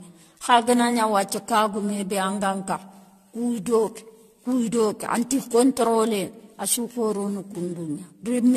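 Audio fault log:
Throughout: generation loss. The speech sounds swirly, smeared and hollow, with blurred consonant attacks. This is likely from repeated lossy re-encoding, around ten passes, each requantising on a shifted frame grid, consistent with AAC-LC near 64 kbit/s.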